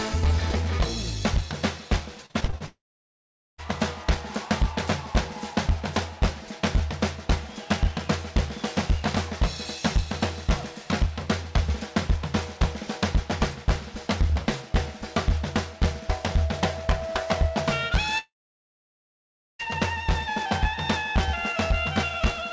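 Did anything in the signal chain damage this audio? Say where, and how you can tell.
Yes, at the network stage, on a call path that otherwise shows nothing above 8 kHz, which fits a G.722 codec at 64 kbps.

Repeated packet loss (robotic sound) runs from 2.26 to 2.62 s. Six short holes, the longest 35 ms, break up the sound, and about 40% of that stretch is patched by stretching the last good audio forward. Because the repairs come so close together, the sound turns choppy, with pieces missing, instead of flowing. The jitter buffer is concealing packets that arrived late or not at all.

Two long gaps follow the same pattern, from 2.66 to 3.60 s and from 18.18 to 19.61 s. Each opens with a brief smeared continuation of the last sound that fades quickly. Then comes true silence, about 800 ms in the first gap and about 1.3 s in the second, before the audio resumes with that section simply absent. 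The cause is likely a long network dropout, where the receiver had nothing to play and could only bridge the first fraction of a second.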